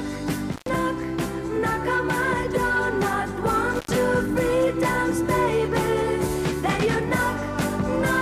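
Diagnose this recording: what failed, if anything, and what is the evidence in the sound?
Intermittent contact in the analogue wiring: the sound drops out briefly near 0.52 to 0.70 s and 3.73 to 3.92 s, each gap about 0.1 s, as a loose connection opens.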